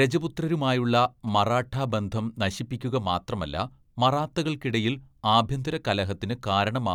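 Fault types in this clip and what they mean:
GSM signalling bursts: from 0.95 to 1.76 s, just before "ബന്ധം നശിപ്പിക്കുക", a galloping dit-dit-dit of short buzzes sits roughly 20 dB under the speech. A nearby 2G phone is sending brief groups of radio bursts, as it does when a call or text is being set up, and the audio circuitry rectifies that RF into the signal. The buzz repeats at about 217 Hz, the GSM frame rate.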